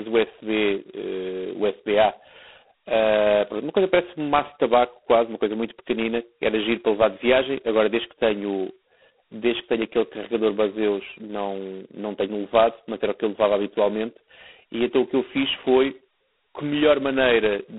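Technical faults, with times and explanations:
Throughout, G.726 ADPCM: each sample is coded as a coarse difference from a prediction, leaving a harsh, rasping hiss that tracks the speech level, which fits 16 kbit/s. A spectrogram shows a 250 Hz to 3.4 kHz band, empty above 3.9 kHz, with grainy noise between harmonics.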